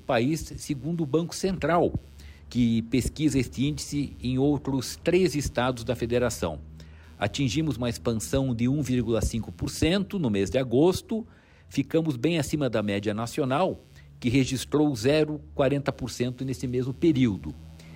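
Computer activity noise: load changes in the computer disturb the audio's shared ground, adding a faint buzz of about 150 pulses per second, roughly 40 dB below the sound, throughout.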